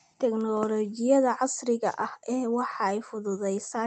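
Nothing technically wrong turns up in this short bit of speech, which came over a WebRTC call using Opus and sounds just as you'd expect from that route.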